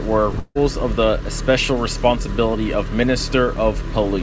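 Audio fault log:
0.32–0.35 s, short concealed packet loss: a brief smear shortly before "of the especial responsibility", where roughly 20 ms of audio went missing and about 14 ms of it was patched by continuing the preceding sound.
0.39–0.57 s, long network dropout: a fading buzz or hiss trailing into near-silence before "of the especial responsibility", likely a stretch that never arrived, filled by decaying concealment.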